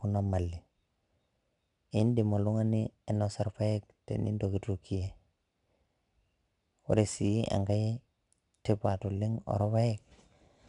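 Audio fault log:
throughout 4-bit ADPCM compression: gritty hiss swells with loud speech and fades in pauses, unlike steady noise; nothing above 10.6 kHz suggests a 22 kHz sample rate.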